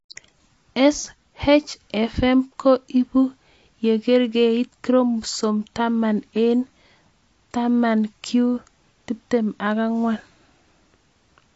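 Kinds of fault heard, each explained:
AAC compression: throughout the clip, the speech is dull and smeared, with nothing above 7.7 kHz and plainly audible codec damage, a warbling, fizzy texture on sustained sounds and sibilants. The likely cause is AAC-LC coding at a low rate, which fits about 32 kbps. Each frame's spectrum is quantised coarsely against a hearing model, the top band is dropped, and thinly coded bands turn into swirling artefacts.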